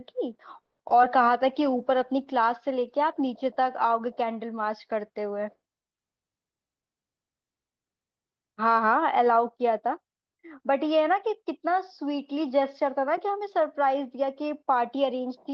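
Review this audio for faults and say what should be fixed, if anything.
At 0.61 s the speech stops dead for 180 ms and then resumes with nothing lost, so a gap was inserted into the call. That's a call audio freeze, likely packets stalling in transit until the jitter buffer ran dry. A slightly deeper buffer or steadier network path would ride this out.

Right after, at 0.89 to 0.92 s and again at 1.02 to 1.05 s, there are brief smears where the receiver patched over short concealed packet loss by extending the preceding sound. About 20 ms and 40 ms of real audio went missing. Forward error correction would help here.

From 1.34 to 1.79 s the jitter buffer slow-down kicks in. The receiver repeats tiny slices of the waveform to rebuild its reserve, adding 46 ms, so that stretch plays at 91% speed with unchanged pitch and sounds drawn out. Fewer underruns upstream would avoid it.

From 1.49 to 4.92 s there's a call bitrate drop. 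The Opus stream sounds coarser and duller, and the top end falls from 12 kHz to 8 kHz, which fits a cut from roughly 32 kbps to about 17 kbps, held at the low point for 2.74 s. A steadier bandwidth estimate would prevent this.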